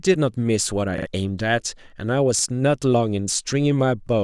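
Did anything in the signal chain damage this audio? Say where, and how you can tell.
Yes. A repeated buffer at the driver or buffer stage. At 0.98 to 1.07 s a 43 ms slice stutters three times, and at 2.39 to 2.43 s twice. Each repeat has a hard join. That length fits a 1024-sample buffer. Audio arrived late, so the device replayed the last block.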